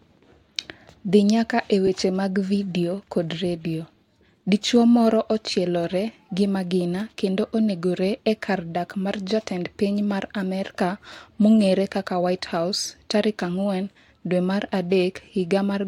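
Lost LE Audio frames at 1.87 s, just after "dhi nyaka e": a 10 ms gap in the Bluetooth LE Audio stream, which fits a single lost frame. The LC3 decoder filled it by repeating the previous spectrum with randomised signs, leaving a brief noisy smear in the speech.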